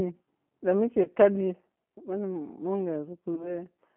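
The whole clip runs through the G.729 codec, and the codec damage is plainly audible. The speech has that slightly rough, synthetic edge you get when a voice is rebuilt from a vocal tract filter, a pitch predictor and a few pulses per subframe, which fits the 8 kbit/s G.729A flavour. The line is squeezed into roughly 200 Hz to 3.4 kHz, so there's no low body and no air up top.

At 1.03 to 1.10 s there's a VoIP packet loss concealed by the speech codec. About 20 ms of audio went missing, which fits two lost 10 ms frames. The decoder filled the gap by extending its last pitch and filter settings, so you hear a brief buzzy or noisy smear instead of a hard dropout. The same thing happens again at 3.36 to 3.58 s, where the recovery takes longer. The sound stays weak and a bit mangled well after the gap, because each new frame is built on the guessed one before it.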